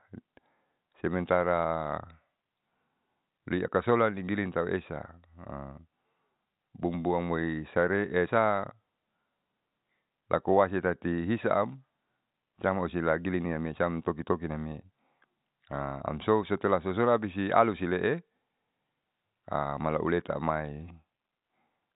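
No technical faults can be heard anywhere in this speech clip. It has passed through G.711 telephone coding, which works as it should: nothing above about 3.8 kHz comes through, and any trace of the coding is faint at most.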